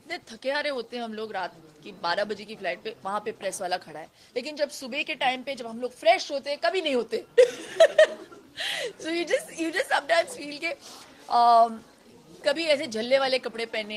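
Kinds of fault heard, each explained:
No audible faults: the audio holds steady throughout with nothing to flag.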